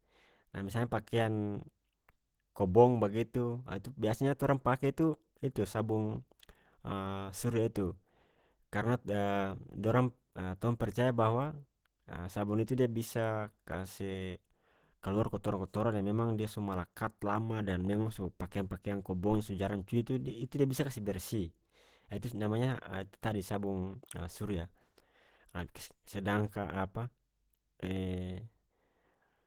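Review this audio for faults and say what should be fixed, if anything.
Throughout, Opus compression, likely at a low bitrate near 16 kbps in its hybrid speech mode, leaves the speech plainly muffled and hoarse. Encoding at a higher bitrate would prevent this.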